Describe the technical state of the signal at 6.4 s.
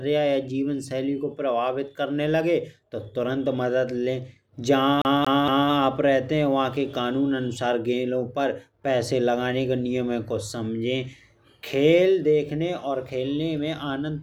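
The signal at 6.4 s is intact, with no audible fault at that moment.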